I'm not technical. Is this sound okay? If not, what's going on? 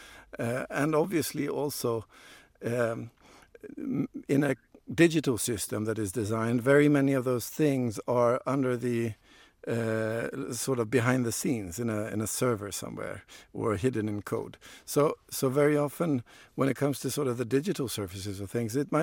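Yes, nothing stood out as a problem when listening to this recording.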